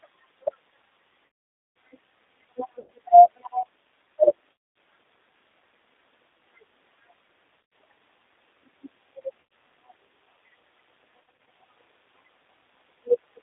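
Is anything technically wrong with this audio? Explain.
Yes. The speech has been through a G.729 codec for its whole length, and the damage is plainly audible. The sound is confined to a telephone band of roughly 300 Hz to 3.7 kHz. The codec rebuilds each 10 ms frame from a vocal tract filter, a pitch predictor and a few coded pulses, at a rate consistent with an 8 kbit/s stream. That sparse reconstruction leaves the speech thin, slightly rough and synthetic in texture.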